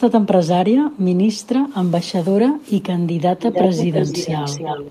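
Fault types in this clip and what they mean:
Echo leak: A delayed copy of the speech returns, likely from a far-end loudspeaker with an imperfect echo canceller. Very faint scraps come at 0.91, 1.34, 1.69 and 2.61 s, 385 ms late. From 3.41 s onward, a loud echo trails 316 ms behind.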